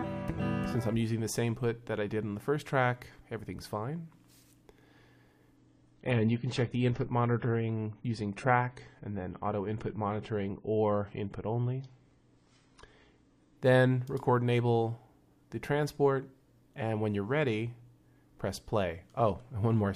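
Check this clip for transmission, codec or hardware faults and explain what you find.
There's one fault here: an adaptive stream at a lower bitrate, running from 5.57 s to 13.57 s. For those eight seconds the stream switched down to a leaner encode, which fits a drop from around 96 to 24 kbit/s on the same AAC codec, probably because the connection slowed. You hear it as an abrupt dulling with no gap. Nothing survives above about 9.9 kHz, and coding artefacts get more obvious until full quality snaps back.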